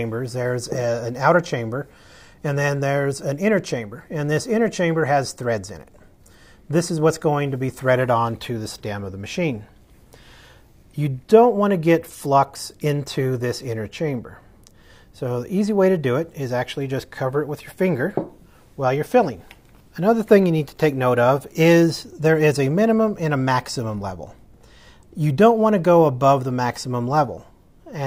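No technical faults are audible.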